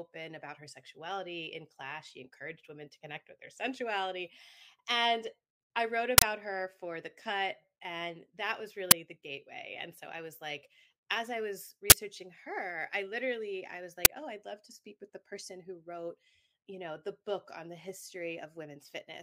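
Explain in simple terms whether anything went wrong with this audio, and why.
Uninitialised buffer bursts occur at 6.18 to 6.22 s, 8.91 s, 11.90 to 11.92 s and 14.05 s. Each short, loud crackle of digital noise happens because a chunk of audio, between 10 and 40 ms long, played before any sound was written into it, so leftover memory came out as noise.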